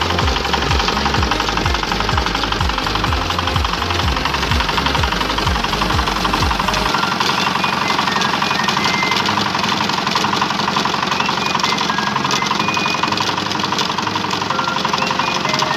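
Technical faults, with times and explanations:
No technical faults can be heard anywhere in the signal, with level, continuity and timing holding steady all the way along.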